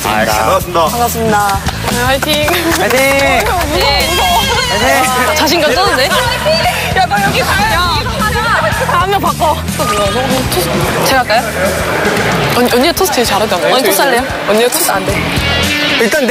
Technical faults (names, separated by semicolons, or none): none